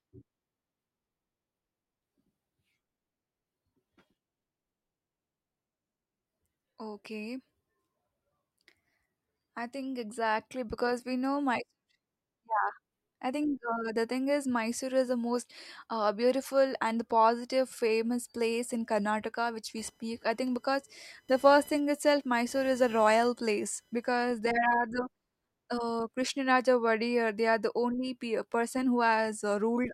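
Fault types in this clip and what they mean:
Computer activity noise: from 19.77 s to 24.22 s a thin, buzzy chirping runs under the speech, pulsing at around 1 kHz and sitting roughly 30 dB below it, so it is faint. It starts and stops on its own, unrelated to what is being said. This happens when changing load in the processor, graphics hardware or mouse shifts the ground shared with the audio circuitry, and that activity leaks into the recording.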